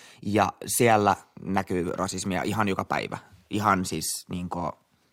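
No technical faults can be heard anywhere in this speech recording.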